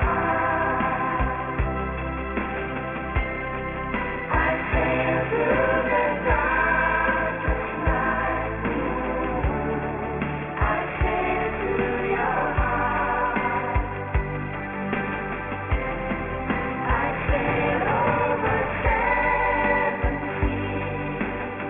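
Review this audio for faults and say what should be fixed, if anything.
Aliasing runs through the whole clip. Everything is folded at 3 kHz, which fits a drop from a 44.1 kHz rate to about 6 kHz with no low-pass filter first. Content that sat above 3 kHz has been mirrored back below it, onto unrelated pitches. The folded energy sits only about 10 dB under the real signal. So the high end sounds gritty and metallic, and the spectrum runs hard up to the band edge. To prevent it, apply an anti-aliasing low-pass filter below 3 kHz before resampling.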